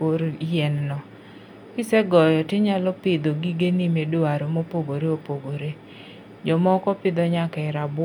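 A speech recording, and nothing is technically wrong with it.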